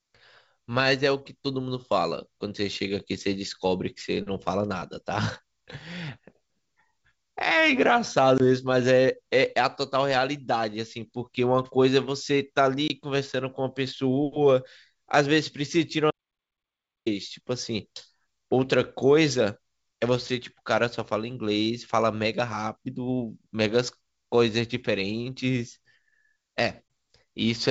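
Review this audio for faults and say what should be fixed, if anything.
Packet loss on an ADPCM call at 8.38–8.41 s, 12.88–12.91 s and 26.88–26.90 s. Each loses a single packet of about 20 ms, and the decoder's predictor and step size briefly lose track, leaving the speech slightly distorted before it settles.

Audio dropout to silence from 16.11 to 17.06 s: nearly a second of silence with no room tone, likely from a lost input or link while writing continued.

Add packet loss concealment and jitter buffering on the G.722 call path, and monitor input connections so dropouts are caught during recording.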